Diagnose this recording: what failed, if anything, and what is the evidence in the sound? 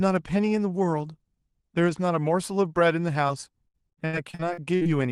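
The network stage failed: packets on the call path were repeatedly lost or arrived too late, and the receiver covered each hole by stretching the previous audio. This is repeated packet loss (robotic sound). From 3.27 to 4.87 s the speech turns choppy, with pieces missing, with 13 separate gaps, the longest 77 ms, and roughly a quarter of that stretch replaced by concealment. The Opus coding, with its top end near 12 kHz, sits under all of it.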